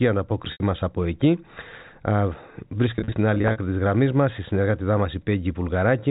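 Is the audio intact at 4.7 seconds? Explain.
Yes, the speech at 4.7 seconds is intact, with no dropout, glitch or other fault at that moment, only the narrow telephone band of G.711 coding.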